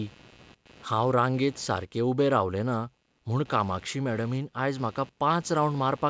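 Computer activity noise runs under the speech from start to finish: a faint buzzing, chirping texture that pulses at around 100 times a second and sits well below the speech, about 30 dB down. Changing load on the processor, graphics card or mouse shifts the ground shared with the audio circuit, and that current leaks into the signal. Unlike steady mains hum, it waxes and wanes with the computer's work rather than holding a fixed tone, and it ignores the speech entirely. The call path's band limit, with nothing above 8 kHz, fits G.722 at 64 kbps.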